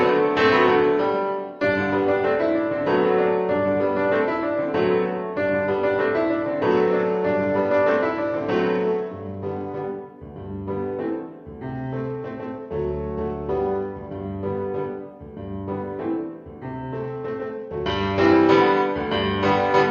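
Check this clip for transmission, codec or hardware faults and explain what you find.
Three stretches, at 6.71 to 9.81 s, 11.75 to 14.14 s and 16.94 to 18.31 s, lose their treble and take on a gritty, grainy noise before brightness returns. This is a Bluetooth SBC bit pool drop: under link congestion the encoder cut its bit budget, which points to a fall from a bit pool of 28 to about 10, roughly 84 kbps. Starved of bits, the top sub-bands got few or no bits and the remaining bands were coarsely quantised.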